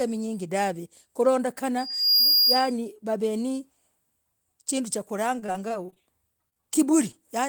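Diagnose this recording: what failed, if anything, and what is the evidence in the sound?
Loudspeaker feedback squeal, at the acoustic loop between loudspeaker and microphone. From 1.78 to 2.73 s a single tone near 4.8 kHz rises out of the speech. It swells over roughly 0.4 s. It settles at around 5 dB above the speech. The microphone was hearing the loudspeaker it fed. At that one frequency the loop gain passed unity, so the tone fed itself and grew. It stops at 2.73 s.

Repeated packet loss (robotic sound), a network fault. From 5.39 to 6.02 s the speech turns choppy. Short holes keep recurring, the longest about 27 ms, and about a quarter of that stretch is patched. A second burst runs from 6.49 to 6.65 s. There about half is patched, with holes up to 25 ms. Each missing piece was filled by extending the last sound, and the next gap arrived before the speech could recover.

Short concealed packet loss, also on the network path. 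Between 7.11 and 7.15 s there is a brief smear in the speech. About 20 ms of audio never arrived in time. The receiver bridged the hole by continuing the preceding sound. It then blended back into the real signal. The result is a small wobble rather than a clean cut, and a short sound there may be lost.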